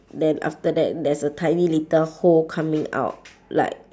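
Speech, with nothing technically wrong to report.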